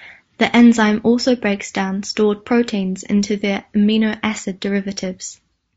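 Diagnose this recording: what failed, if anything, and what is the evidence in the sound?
Codec stage. Across the whole clip the speech sounds rough and grainy, with a hissy fill between the harmonics and a thin, synthetic top end. That's likely low-delay AAC compression, AAC-ELD style, whose short frames blur pitch detail at a rate that fits roughly 32 kbps.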